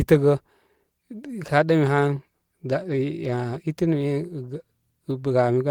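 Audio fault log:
Nothing to log here: the speech comes through with no faults, and the Opus voice compression it passes through leaves only a light touch on the sound.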